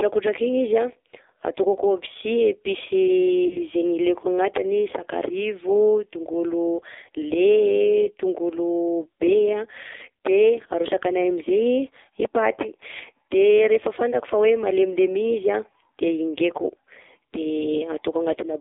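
Throughout, the speech carries the AMR narrowband mobile codec sound: nothing passes below 300 Hz or above 3.7 kHz, and the heavy coding makes the voice buzzy and synthetic. The vocal-tract model is starved of bits, which fits a low-rate mode near 5.9 kbps.

From 3.48 to 3.61 s there is a lost AMR speech frame: a brief dip or warble as the decoder repeats the previous pitch and vocal-tract settings at falling gain, then a weak, rough return. This fits a single missing 20 ms frame.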